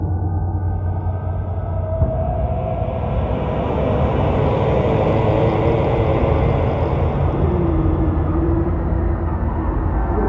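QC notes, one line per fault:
No technical faults are audible anywhere in the signal.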